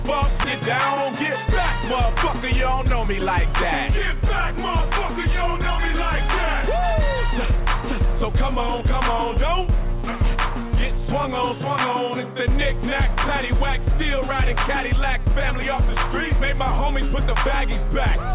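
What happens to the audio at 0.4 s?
At 0.44 to 0.46 s the audio jumps abruptly forward, with no gap or fill, and roughly a second of sound goes missing. This is a skip ahead: a stretch was discarded while later audio was already queued, and playback joined the two sides almost directly.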